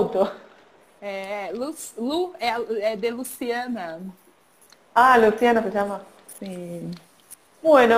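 A crude rate conversion runs through the whole sound: a gritty, inharmonic fizz that follows loud and bright passages, sitting roughly 30 dB below the signal. The pattern fits nearest-sample stepping from 44.1 kHz to 48 kHz, with samples repeated unfiltered. A spectrogram shows faint stray lines unrelated to the harmonics. The waveform, zoomed in, shows periodically doubled samples.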